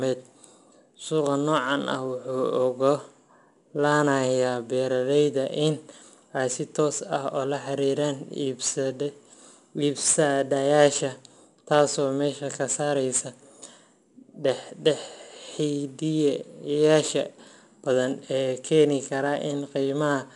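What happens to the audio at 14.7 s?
At 14.7 s the speech carries 4-bit ADPCM compression, present across the whole clip. Each sample is coded as a coarse 4-bit step from a prediction, leaving plainly audible gritty hiss that rides the speech level and roughens sharp onsets, with nothing above 10.6 kHz.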